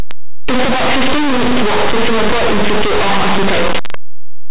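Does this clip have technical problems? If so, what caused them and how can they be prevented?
Yes. Throughout the speech, linear audio read as companded: plain 8-bit samples were decoded as mu-law codes, so tiny values just on one side of zero became huge outputs while those on the other side stayed small. The spectrogram shows dense broadband smear. Prevent this by declaring the file's encoding correctly when reading it.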